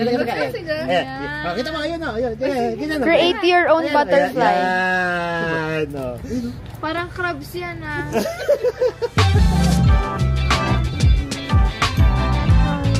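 No technical fault can be heard anywhere in this audio. Nothing in the sound calls for a time or a cause to be pointed out.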